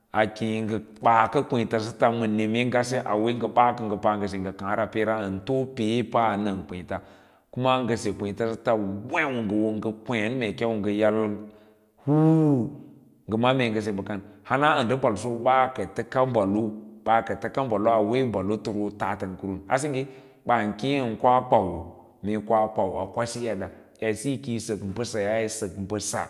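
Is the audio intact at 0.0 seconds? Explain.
Yes, the speech is intact at 0.0 seconds, with no fault present at that moment.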